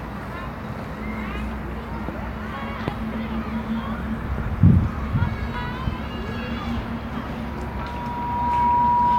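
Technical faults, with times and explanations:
7.43–9.18 s: loudspeaker feedback squeal. A single tone near 965 Hz swells over about a second and a half to roughly 10 dB above the rest of the sound and persists to the end, as the microphone-to-loudspeaker loop gain exceeds unity at that frequency.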